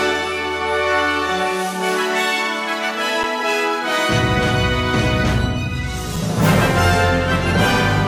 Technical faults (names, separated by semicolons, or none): adaptive stream starting at a low bitrate; underrun with held sample